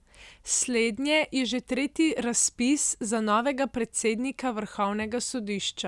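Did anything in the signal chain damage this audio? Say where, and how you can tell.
No, nothing in this speech recording stood out on listening as damage from any stage of the signal chain.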